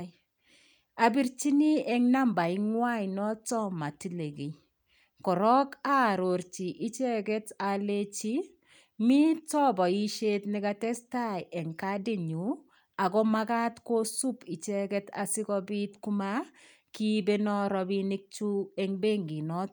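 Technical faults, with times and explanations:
No technical faults can be heard in this recording.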